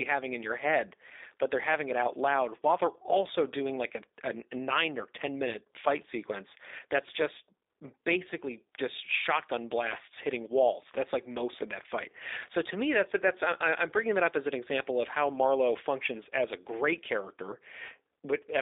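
Throughout, the speech sounds plainly rough and synthetic, confined to a 300 Hz to 3.7 kHz band. That is G.729 codec damage, fitting an 8 kbit/s VoIP stream: each 10 ms frame is rebuilt from a vocal tract filter, a pitch predictor and sparse pulses.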